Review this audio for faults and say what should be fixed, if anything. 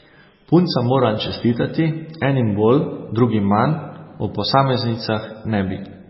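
Heavy MP3 compression damages the speech for the whole clip. Nothing is present above 5.6 kHz, so the top end is cut flat at a fixed point. The sound has a watery, swirly texture, and s sounds turn metallic and chirpy. This is likely MP3 compression at a very low bitrate, around 16 kbps. Starved of bits, the encoder drops weak frequency lines. Those lines flicker on and off between frames, which causes the swirl. To prevent it, keep the original uncompressed recording, or encode at a much higher bitrate.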